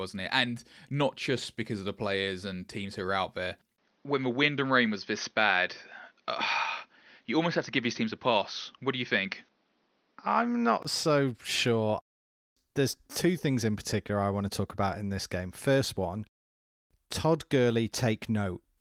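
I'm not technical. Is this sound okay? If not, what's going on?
No. Input switched to a poorer device, 3.76 to 10.85 s: after a tiny gap the speech turns dull, likely a lesser microphone taking over, then clears again.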